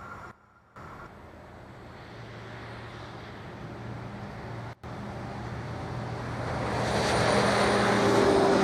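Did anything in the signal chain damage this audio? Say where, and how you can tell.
Yes. A sudden gain jump, likely a digital gain change applied without a ramp, drops the level about 16 dB from 0.31 to 0.76 s and about 23 dB from 4.73 to 4.84 s. The background falls with the sound, instantly, unlike a compressor's gradual attack.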